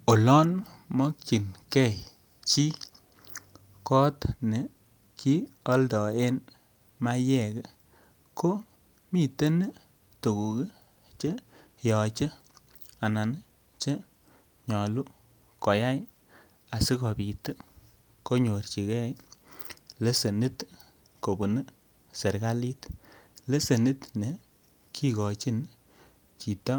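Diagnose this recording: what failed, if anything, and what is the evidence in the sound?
No fault found in this recording.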